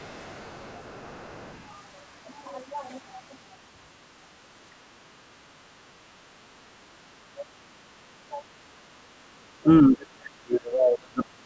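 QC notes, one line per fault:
0.0–1.74 s, other side's voice leaking through: the echo canceller likely failed to remove all of the far end's loudspeaker sound from the microphone signal, so a second, faint voice sits underneath, roughly 30 dB below the main speech.
4.84–5.55 s, 5.95–6.28 s, 7.34–9.66 s and 9.88–11.45 s, speech suppressed in double talk: with both sides talking, the echo canceller likely could not tell the near talker from echo and attenuated everything. The speech dips by roughly 20 to 35 dB, deepest in the last stretch.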